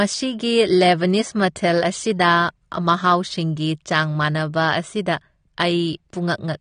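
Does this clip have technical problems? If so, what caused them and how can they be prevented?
Yes. Throughout the speech there is plainly audible AAC compression damage: dull, band-limited tone with a warbling, fizzy texture on sibilants. This likely comes from AAC-LC coding at a low bitrate, consistent with about 32 kbps, where quantisation leaves spectral holes. Prevent it by encoding at a higher bitrate.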